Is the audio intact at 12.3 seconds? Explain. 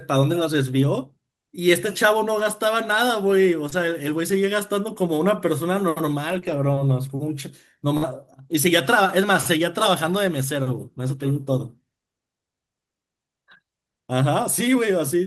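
Yes, the audio is intact at 12.3 seconds, with the speech continuing there without any audible fault.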